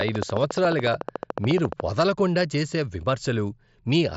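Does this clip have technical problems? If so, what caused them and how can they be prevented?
Yes. A train of clicks runs from 0.01 to 1.81 s, ending just before "వదలకుండా చేసే": around thirty similar pulses at a regular 14 per second, peaking roughly 10 dB above the speech. This is likely interference from nearby equipment or a faulty connection or power supply. Keeping the recording chain away from noisy electronics and using secure connections and a stable power supply would prevent it.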